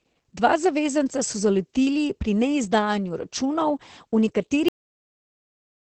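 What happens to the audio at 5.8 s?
At 5.8 s there is only dead digital silence. The speech stops abruptly at 4.68 s, mid-sound, with no decay, and nothing returns through the end at 5.91 s. This is a cut-off end: the final buffers of the recording were never written or played out, so the waveform simply ends where the data runs out, and everything after that point reads as silence rather than as a natural fade or room tail.

The silence carries no trace of it, but the whole clip passes through heavy Opus voice compression. Up to the cut, the speech sounds muffled and slightly hoarse and robotic, with nothing above about 8.5 kHz. That fits the SILK linear-prediction coder working in wideband mode on 20 ms frames at a low rate, likely around 10 kbps. At that rate it trims the top of the spectrum and codes the excitation coarsely.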